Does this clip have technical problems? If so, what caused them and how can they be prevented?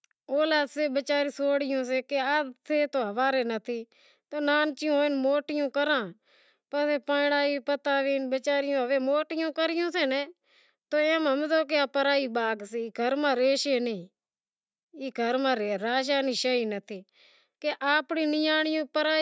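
No, no technical problems here.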